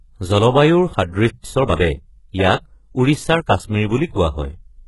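HE-AAC compression, from start to finish: the speech carries heavy codec damage, with nothing above 11.5 kHz. This is likely HE-AAC at a very low bitrate, which fits a rate around 12 kbps. The codec transmits only the lower spectrum and fills in the treble by copying lower bands upward under a coarse envelope. The rebuilt highs don't match the real harmonics across the crossover, so s sounds come out gritty, metallic or lisping.

Playback stall, 1.30 to 1.44 s: the speech cuts off mid-flow and the output goes silent for 147 ms. The likely cause is that the player ran out of buffered data or had its output thread blocked, so nothing reached the output until it recovered. When the sound returns, it picks up again rather than starting fresh, leaving a clear hole in the middle of the phrase.

Time-compressed catch-up, 1.44 to 2.02 s: right after the gap, the speech runs at 1.25 times normal speed while keeping its normal pitch. 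To clear the backlog built up during the stall, the player cuts out short slices and cross-fades the remaining pieces together. The result sounds hurried and clipped, like a rushed delivery, until normal pace returns at 2.02 s.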